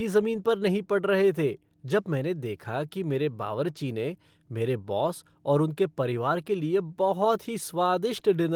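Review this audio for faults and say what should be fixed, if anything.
Nothing here needs fixing; the speech carries just the light trace of Opus voice compression, with the full band intact up to about 20 kHz.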